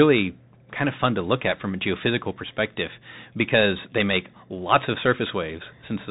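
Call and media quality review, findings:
Bluetooth CVSD headset codec, full clip, 0 to 6 s. Narrowband speech, nothing above 4 kHz; s sounds scratchy, loud high-frequency peaks distorted, granular hiss under speech throughout. Probable component: headset link on SCO/CVSD, consistent with 64 kbps. Mechanism: one-bit up/down delta coding with adaptive step size. Fast transients outrun the step (slope overload), and the quantisation produces steady granular noise.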